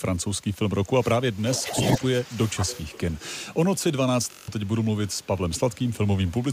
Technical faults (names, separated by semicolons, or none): speech suppressed in double talk; echo leak; system hang loop